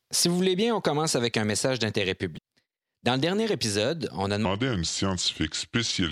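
At 2.34 to 2.39 s a brief glitch marks damaged data in a compressed stream: the decoder loses sync, unlike a clean dropout's silence. From 4.45 s to the end, a section at the wrong speed plays at 0.757 times speed, roughly five semitones lower. Speech slows and deepens together, which separates it from pitch shifting alone. The likely cause is a wrong clock.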